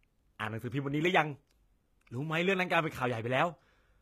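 Throughout, the treble sounds rebuilt rather than real. This is likely HE-AAC compression, fitting a very low bitrate. Upper harmonics mismatch, so s sounds turn gritty and lispy.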